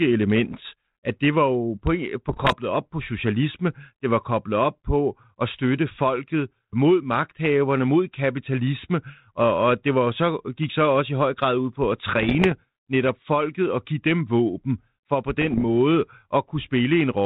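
Short bursts of popping and rasping roughness, with the level briefly jumping, break into the speech at 0.47 to 0.60 s, 2.29 to 2.56 s, 12.04 to 12.53 s and 15.41 to 15.65 s. These are bit errors on an ADPCM link, about one bit in a hundred or fewer. Each flipped bit throws off the decoder's step size and prediction, so the damage rings on for a few milliseconds. The band-limited sound comes from the G.726 ADPCM path at 32 kbit/s.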